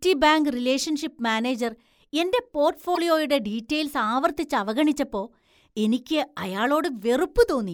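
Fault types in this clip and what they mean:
Broken MP3 bit reservoir: a 40 ms glitch at 2.94 s where the speech jumps ahead, likely from cut frames whose borrowed reservoir data went missing.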